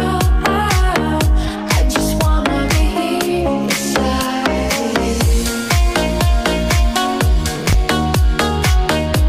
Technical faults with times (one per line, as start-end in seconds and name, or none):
7.56-7.74 processor overload crackle